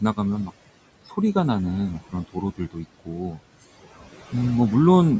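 Right from the start you can hear noise suppressor artifacts. The suppressor is pulling down whatever bands it decides are steady background, frame by frame, by about 17 dB. The room noise, sitting roughly 18 dB under the speech, drops away in the gaps and creeps back up under the talking.

Then there's speech cut by the noise suppressor, twice, close together. From 2.56 to 2.86 s it mistakes part of the speech for noise and turns it down by up to about 16 dB, for around a tenth of a second in total. From 3.05 to 3.38 s it does it again, up to about 13 dB, for roughly 150 ms. In both spots the softer bits sound swallowed and faint rather than cleanly spoken.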